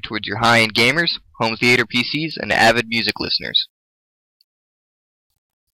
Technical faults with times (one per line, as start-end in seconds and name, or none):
3.02-5.79 pre-emphasis left on